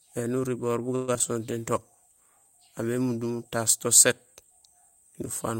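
It's a speech clip, and right after "uriboor bu" at 0.95 s it hits a call audio freeze that lasts until about 1.10 s. The last bit of sound gets stretched into a fading buzz or hiss for roughly 124 ms, with no dead silence, and then the talk picks up exactly where it left off. Nothing's lost, but everything after it lands about 124 ms late. That's likely packets stalling in transit while the jitter buffer drained, with the receiver padding the wait instead of going quiet.

Still just after "uriboor bu", there are two bits of short concealed packet loss, at 1.14 to 1.17 s and 1.19 to 1.22 s. Each one is about 20 ms of audio that never made it to the decoder. The receiver papered over them by carrying the previous sound forward for a few milliseconds and blending back in, so you get a quick smear or wobble rather than a clean dropout. Anything very short in those spots can just disappear.

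Then from 1.48 s to 4.61 s there's a call bitrate drop, with the encoder pushed from 64 kbps down to 26 kbps and sitting at the bottom for about 2.07 s. The bandwidth estimate sagged, so the codec had far fewer bits to spend and coded the speech more coarsely. That stretch sounds rougher and watery until the rate climbs back.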